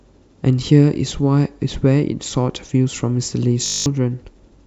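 At 3.66 s the system stalls and a system hang loop sets in: the computer or its audio driver stopped feeding new data while the sound hardware kept replaying the same 20 ms stretch of its ring buffer, about ten times over until 3.86 s. Because that loop is so short, the speech gives way to a steady 50 Hz buzz rather than a stutter, and about a fifth of a second of real audio is lost.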